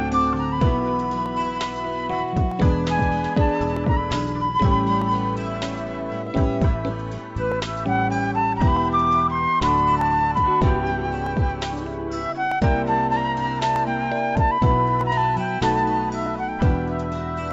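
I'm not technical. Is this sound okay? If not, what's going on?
No. From 1.26 s to 17.51 s, a click repeats every 1.25 s, about fifteen times. These are clock drift buffer slips. Two devices likely keep slightly different time, so a tiny sliver of sound keeps getting dropped or doubled.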